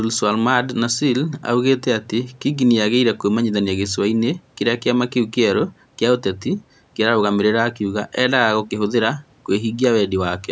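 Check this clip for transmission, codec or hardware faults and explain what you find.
No transmission, codec or hardware faults can be heard in this speech; the usual call microphone processing trims the lowest bass and leaves nothing above 8 kHz, which is expected rather than a fault.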